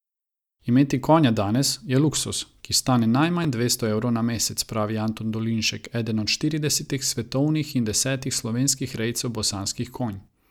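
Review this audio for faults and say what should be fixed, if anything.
Between 3.43 and 3.45 s, right after "je luksuz ki stane" and just before "dvesto evrov na mesec", there is a brief scrambled flicker. This is chunks out of order: a 5.8 ms block of audio was delayed and played three chunks late, after material that should have followed it. No sound is lost, but the shuffled sequence creates three abrupt joins. To prevent it, reassemble buffered chunks by sequence number or timestamp before playback or writing, and drop or conceal any chunk that arrives too late.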